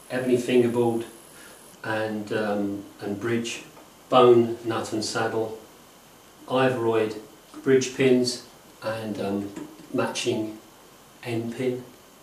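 Nothing in the signal points to a technical fault at any point in the audio.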